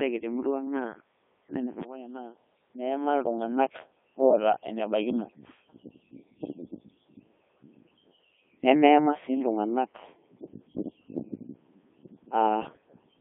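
Codec 2 vocoder throughout: the speech is rebuilt from sine waves using only pitch, voicing and envelope, sounding heavily robotic and buzzy within 300 Hz to 3.5 kHz.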